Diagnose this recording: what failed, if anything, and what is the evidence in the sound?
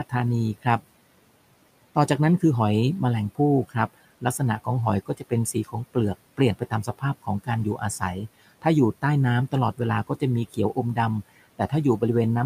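Call processing: speech cut by the noise suppressor at 3.35–4.68, 5.06–5.96, 6.37–8.02 and 9.52–10.97 s, briefly ducking quieter fragments by about 15 dB as if they were room noise.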